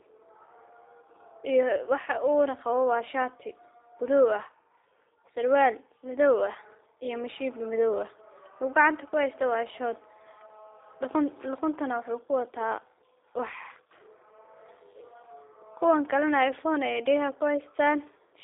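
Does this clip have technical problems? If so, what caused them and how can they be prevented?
Yes. G.729 codec damage runs throughout. Nothing passes above about 3.8 kHz and the band sits near 300 Hz to 3.7 kHz, so the speech sounds boxed-in and slightly rough and synthetic, with pulse-coded texture that fits an 8 kbit/s G.729A path. Prevent it by carrying the call over a wideband codec such as G.722 or Opus, or by recording locally.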